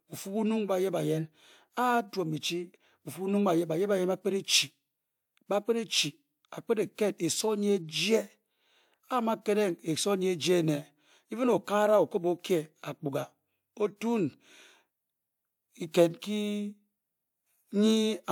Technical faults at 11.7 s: none

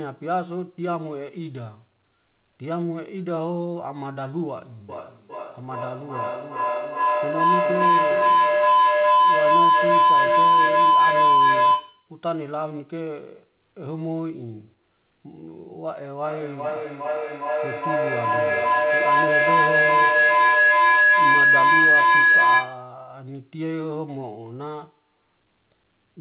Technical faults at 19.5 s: feedback howl

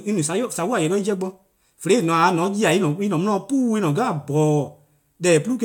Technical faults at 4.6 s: none

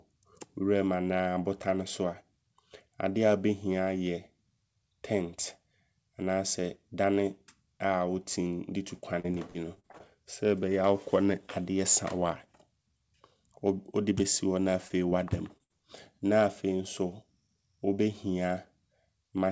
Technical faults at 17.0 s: none

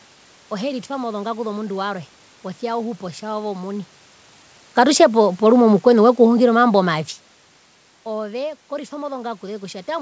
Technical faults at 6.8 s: automatic gain falling

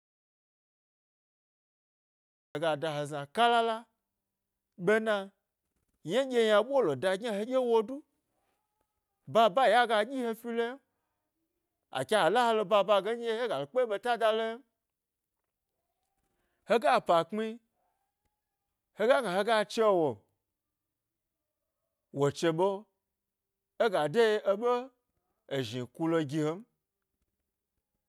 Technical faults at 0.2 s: audio dropout to silence

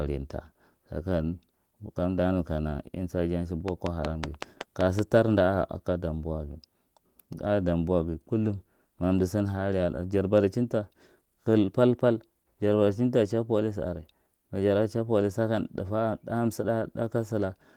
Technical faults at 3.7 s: train of clicks

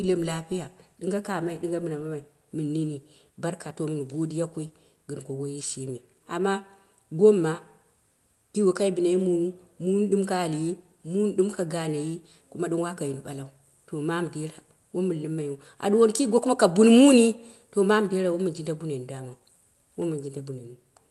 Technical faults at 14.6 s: none

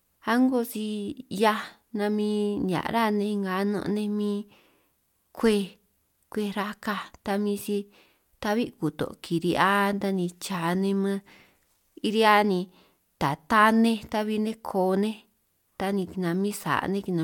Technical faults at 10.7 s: none

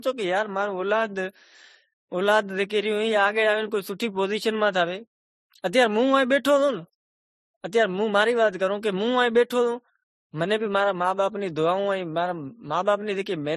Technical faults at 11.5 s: transcoding between lossy codecs

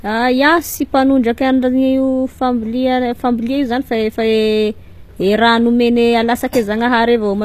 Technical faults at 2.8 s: HE-AAC compression

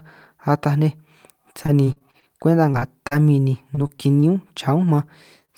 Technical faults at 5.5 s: short concealed packet loss

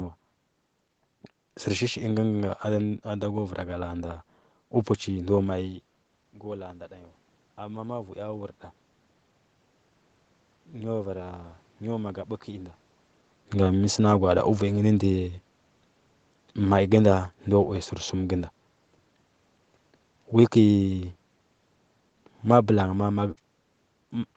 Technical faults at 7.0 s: automatic gain rising

